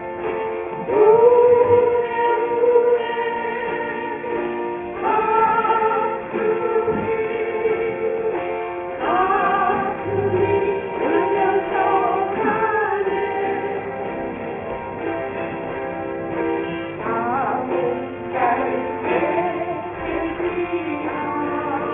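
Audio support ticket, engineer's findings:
Aliasing throughout: downsampling stage dropped the rate without an anti-alias filter, which fits 48 kHz down to 6 kHz. Content above the 3 kHz fold mirrors back as gritty, metallic tones, roughly 20 dB below signal.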